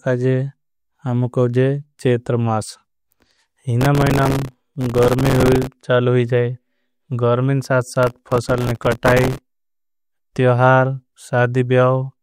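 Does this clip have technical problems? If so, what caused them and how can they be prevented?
Yes. From 3.81 to 5.67 s and again from 8.03 to 9.81 s, a gritty, tearing crackle rides over the speech. This is processor overload crackle. The processor repeatedly missed deadlines on very short buffers, around 1.5 ms each, and each miss replayed a scrap of old audio with hard edges. To prevent it, reduce the processing load or use a larger audio buffer.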